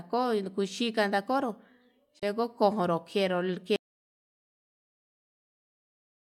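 At 2.19 to 2.23 s, the speech drops out for about 21 ms. This is likely a Bluetooth dropout: one late packet was discarded, then playback resumed.

From 3.76 s, the speech cuts out and never returns. This is likely an audio dropout to silence: the input was lost, leaving silence without room tone.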